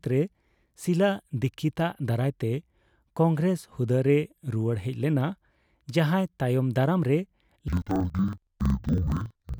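A speech clip whose final stretch, from 7.68 s to the end at 9.59 s, suffers from interleaved audio read as planar. Each block of about 46.4 ms, which fits a 2048-sample block, has its alternating left and right samples split into two halves and played at half speed, so the speech drops an octave, sounds doubled and chops at 21.5 Hz. On a spectrogram the harmonics crowd to half their spacing, broken by vertical seams every 46 ms. The waveform shows matching block-edge discontinuities.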